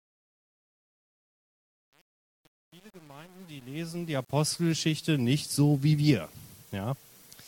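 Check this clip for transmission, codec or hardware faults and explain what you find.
One fault turns up, and it sits in the processing, not the transmission: truncation distortion on the fade. From the start to about 4.49 s, the quiet end gets grainy, and it stays rough almost the whole way, up to about 4.41 s. The gain stage seems to have kept only about 8 bits with no dither, so the quiet parts collapse into a few coarse square steps and don't shade smoothly.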